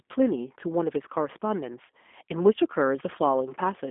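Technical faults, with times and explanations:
Throughout, G.729 codec: the speech is confined to roughly 250 Hz to 3.5 kHz, with nothing above 3.7 kHz, and has a rough, buzzy, synthetic texture. This points to an 8 kbit/s coder that rebuilds speech from a few excitation pulses, which plain telephone band-limiting would not do.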